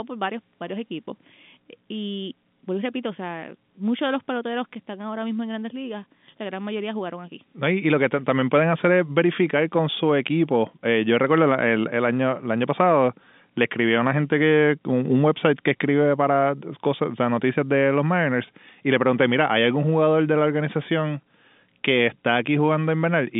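Nothing stood out on listening to this speech recording, which comes through a G.711 telephone channel with its band running from about 150 Hz to 3.6 kHz.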